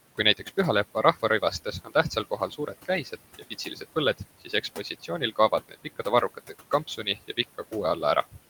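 Noise suppressor artifacts run through the whole clip. The suppressor pulls down the bands it judges to be steady noise, frame by frame, by about 17 dB. The room noise, which sits about 17 dB below the speech, drops away in the gaps and comes back up under the voice. That pumping is audible.

Speech cut by the noise suppressor occurs twice. From 0.95 to 3.83 s, the suppressor mistakes parts of the speech for noise. It turns them down with the background, by about 15 dB at worst. In total, somewhere near 0.7 s is affected. The same happens from 4.18 to 7.73 s, with the deepest drop about 16 dB and again roughly 0.7 s affected. Soft consonants and word endings sound swallowed and faint.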